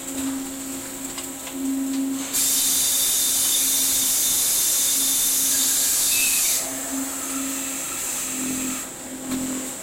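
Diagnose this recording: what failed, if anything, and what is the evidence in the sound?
A block size mismatch (truncated) at the driver or buffer stage affects the audio from 8.02 s to the end. A 43.1 Hz buzz appears, and the material runs about 1.12 times fast at roughly normal pitch, consistent with a 1024-sample read discarding each block's tail.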